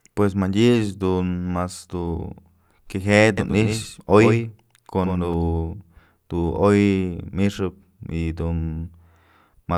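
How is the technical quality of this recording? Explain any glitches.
One glitch stands out. From 3.38 to 5.34 s there is a doubled audio track: a second copy of the speech trails roughly a tenth of a second behind, a few dB quieter. It is likely a second capture path or misaligned edit. The result is a dry, slapback-like echo that starts and stops abruptly.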